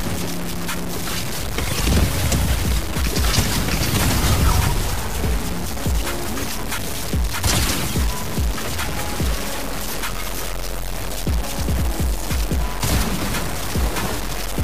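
From start to finish the audio carries grainy, signal-following distortion typical of low bit depth without dither. The level appears to have been truncated to about 4 bits with no dither. The likely cause is that truncation, leaving error only about 10 dB below the signal. Quiet passages turn gritty or sputter to silence. A waveform shows coarse staircase steps and flat runs near silence. A spectrogram shows broadband grit that rises and falls with the sound.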